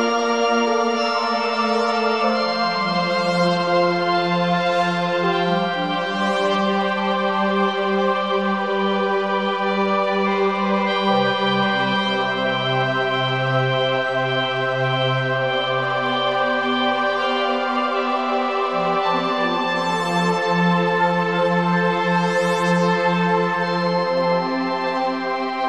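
No technical faults can be heard anywhere in this audio.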